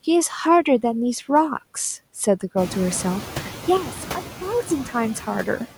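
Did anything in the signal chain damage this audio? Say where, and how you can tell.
Yes. Noise suppressor artifacts from the call-processing stage run through the whole clip. Background noise is pulled down by about 7 dB in the gaps and swells back under each phrase. Unlike a codec fault, the bandwidth stays intact and only the noise floor pumps with speech activity. The room noise rising by about 15 dB near 2.5 s makes this gating easier to hear.

A sudden gain jump occurs at 3.77 s, where the level falls by about 10 dB and stays there until 4.7 s. Speech and background noise drop together in a single step with no ramp. This is likely a digital gain change applied unsmoothed in the processing chain. An AGC would glide instead, and the suppressor would move only the noise.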